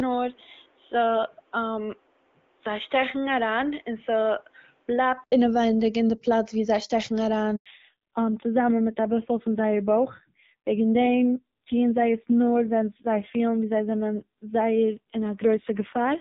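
Input switched to a poorer device, from the start of this speech clip to 5.32 s: the sound is dull and boxy, with nothing above 3.8 kHz, a level roughly 5 dB lower and a noise floor only around 35 dB down. The likely cause is a switch to another microphone or a headset call profile, and an 80 ms silence marks the switch back to the fuller input. Between about 5.3 and 7.6 s the HD Voice (AMR wideband) coding adds only light coloration. Handover gap at 7.56 s, right after "ווי זיי שטעקן אריין": the sound drops out for 100 ms while the call moves between networks, so nothing survives from that stretch. Fallback to narrowband from 7.66 s to the end: everything above 4 kHz disappears and the speech turns thin and rasping, which fits a drop from wideband coding around 12.65 kbit/s to narrowband coding near 5.9 kbit/s.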